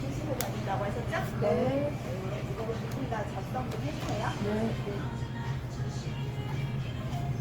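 Throughout the clip the sound is swirly, smeared and hollow, and attacks blur. This is generation loss, likely from about ten passes through Opus at 64 kbit/s. Each re-encode quantised again on a shifted frame grid, so noise built up.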